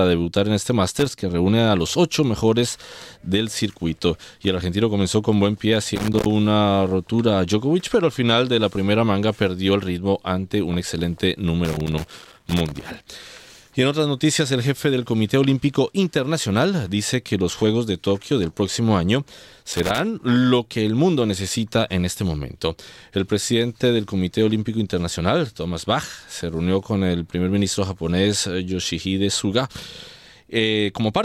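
Loose connector crackle bursts in at 0.96 to 1.22 s, 5.96 to 6.31 s, 11.65 to 13.07 s and 19.63 to 20.0 s. A worn contact keeps breaking and remaking. The signal chops in and out. It sounds like irregular scratchy crackle, longest near 12 s.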